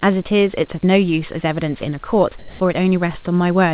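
From 2.39 to 2.6 s, a pause of about 210 ms loses its natural room background. A flat, featureless hiss replaces it, differing in level by roughly 3 dB from the surrounding background, which itself sits about 22 dB below the loudest speech. This is comfort noise in place of the background, likely caused by the sender's voice detector halting transmission in the gap while the receiver filled the silence with synthetic noise shaped only loosely like the real room sound.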